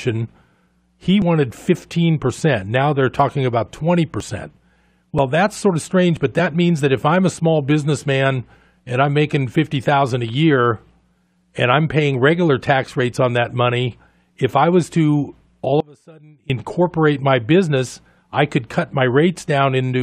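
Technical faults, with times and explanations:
1.22, 2.21, 3.2, 4.2, 5.18, 6.17, 12.14 and 13.13 s: overlap between stream segments. Tiny clicks or skips recur at roughly one-second spacing, matching 1-second segments whose time stamps overlap, so a few milliseconds are trimmed and the waveform jumps. The skip before "that's sort of" and between "regular tax" and "on that money if" are examples. Unlike the dropout, only a few milliseconds go missing.
15.80 to 16.50 s: audio dropout to a faint residue. Just after "I was to all", the sound cuts abruptly for about 0.69 s, leaving only faint sound roughly 30 dB below normal, then returns mid-flow. This is likely a lost signal feed with the downstream path still live. The abrupt edges distinguish it from a pause or fade.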